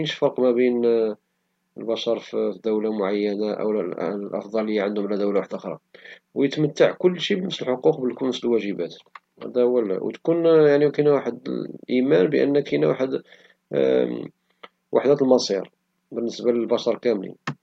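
Nothing in this recording stands out as a technical fault, so there's nothing to point to at any moment along the way.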